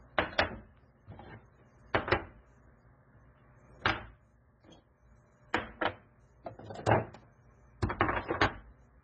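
Throughout, the sound carries heavy MP3 compression damage, likely from a very low bitrate around 16 kbps. Nothing survives above 8.4 kHz, a flat ceiling on a spectrogram, and weak detail below it flickers as scattered blocks, sounding watery and swirly with smeared attacks.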